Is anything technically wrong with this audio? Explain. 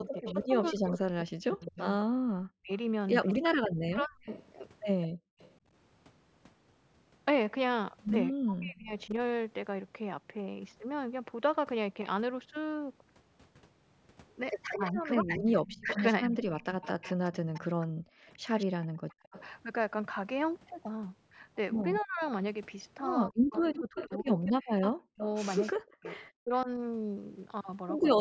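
Yes, the speech shows echo-canceller trouble of three kinds.

Speech suppressed in double talk occurs from 0.0 to 4.3 s, 8.3 to 9.1 s and 14.8 to 26.7 s. The voice dips by up to about 40 dB, likely because a canceller mistook it for loudspeaker echo while both sides spoke. Unlike gating, it is the talker who drops, not the room.

An echo leak runs from 0.06 to 5.5 s and 14.7 to 26.3 s. A faint copy of the voice, around 15 dB down, trails by 208 ms, likely as loudspeaker pickup the canceller failed to remove. Unlike reverberation, it is a distinct delayed repeat.

Background gated by the echo canceller occurs at 5.08 to 5.40 s and 17.89 to 18.32 s. The room noise drops by about 40 dB for a few hundred milliseconds while the canceller clamps the microphone, then returns. The voice itself is not what disappears.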